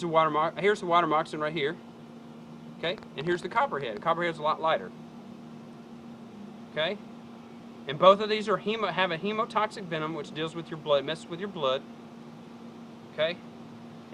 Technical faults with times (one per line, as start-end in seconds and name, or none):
2.84-3.98 train of clicks